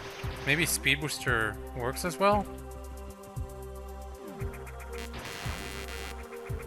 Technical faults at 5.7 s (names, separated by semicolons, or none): computer activity noise